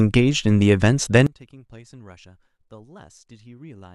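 One channel inverted from 1.27 s to the end: speech falls about 26 dB, likely as reversed polarity cancels the shared centre in mono.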